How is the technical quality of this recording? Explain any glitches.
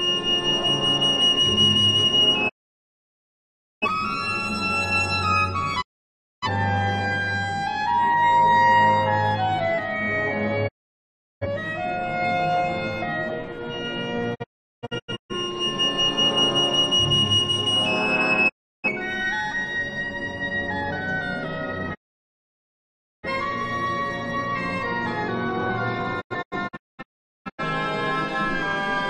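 Poor: the signal breaks up repeatedly with digital broadcast dropouts at 2.48 to 3.87 s, 5.80 to 6.47 s, 10.67 to 11.47 s, 14.34 to 15.34 s, 18.48 to 18.89 s, 21.93 to 23.28 s and 26.20 to 27.63 s. Each time the receiver stops getting valid frames and mutes with a 20 ms fade until good data returns. The silences last from about 0.34 s to 1.32 s, and at 14.34 s and 26.20 s they come as several short holes, the longest about 0.38 s and 0.43 s. Unlike concealment glitches, nothing is smeared or repeated: the audio simply vanishes and resumes later, with the missing material gone.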